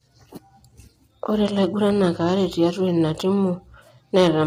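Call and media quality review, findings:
Speech rough and grainy throughout; noise fills the gaps between harmonics and the top band sounds thin and synthetic. Likely low-delay AAC compression (AAC-ELD): short frames resolve pitch poorly, heavy damage fitting a bitrate around 24 kbps.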